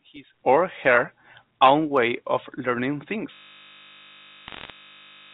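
At 3.34 s the system hangs: the host or driver stops feeding new audio while the sound hardware keeps replaying the same 20 ms stretch of its ring buffer, around a hundred times, until the clip ends. The speech gives way to a steady, flat buzz at 50 Hz, the loop rate, because a slice this short repeats too fast to be heard as a stutter.

From 4.48 to 4.70 s, inside that buzz, bit errors on the digital phone line flip individual bits in the G.711 A-law stream at a rate below one percent. Each error corrupts one sample. Where a sign bit or high-order bit is hit, the sample jumps far from its true value and produces a sharp tick. Together these ticks lay a brief, scattered crackle over the looping buzz. The telephone coding itself is band-limited to 4 kHz and adds no noticeable damage.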